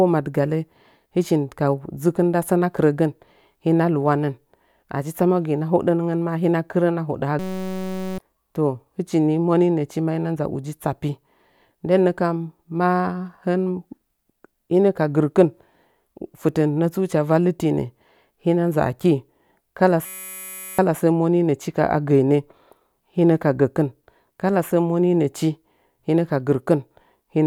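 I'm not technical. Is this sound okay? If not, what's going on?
No. There is a system hang loop at 7.39 to 8.18 s and again at 20.06 to 20.78 s, just before "sə moninəchi". Each time, the computer briefly froze while the sound hardware kept replaying the same tiny 5.33 ms scrap of audio, which fits a 256-sample buffer. Repeating that fast, about 188 times a second, the scrap becomes a steady buzz instead of speech, and roughly seven-tenths of a second of real audio is lost each time.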